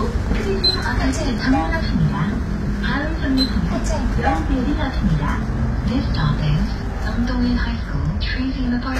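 Throughout, the audio carries plainly audible damage from what is likely HE-AAC compression, which fits a bitrate near 20 kbps. The treble is rebuilt from copied lower bands rather than coded, so it sounds gritty and metallic with misaligned harmonics, and nothing remains above 14.9 kHz.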